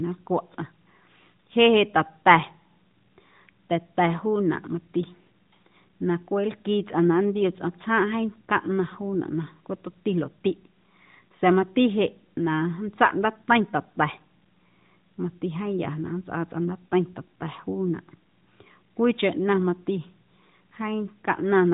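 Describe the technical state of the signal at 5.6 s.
At 5.6 s the signal is intact, with no fault there, only the narrowband AMR mobile codec's band limit with nothing passing above about 3.8 kHz.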